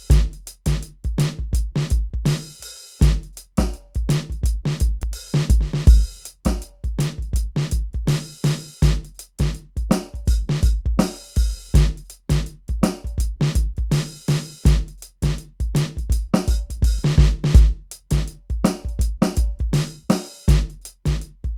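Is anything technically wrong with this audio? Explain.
Yes. At 5.03 s the music likely suffers a dropped buffer (overrun): roughly 30 ms was overwritten before being read, so the sound jumps ahead.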